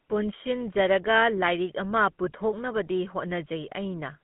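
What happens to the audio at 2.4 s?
At 2.4 s, as across the whole clip, the GSM full-rate codec rebuilds the speech from regular pulses through a vocal-tract filter, leaving a 150 Hz to 3.4 kHz band with a buzzy, gravelly roughness that plain telephone band-limiting wouldn't add.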